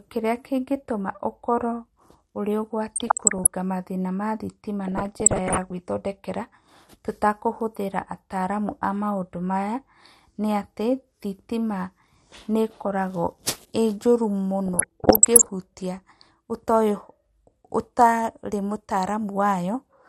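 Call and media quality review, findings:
MP2 compression throughout. Speech dull, upper range missing, gurgling granular texture. Likely a starved MPEG Layer II encode. Upper sub-bands switching off, remaining bands coarsely quantised. Damage level fits roughly 80 kbps.

DAB burbling at 2.86 to 3.47 s, 4.88 to 5.80 s, 14.66 to 15.49 s. Short noise blips in single sub-bands over the speech. Probable cause: weak reception, with a bit error rate of roughly 0.5 to 0.7 percent getting past error correction. Corrupted scale factors make sub-bands jump in level for up to a frame.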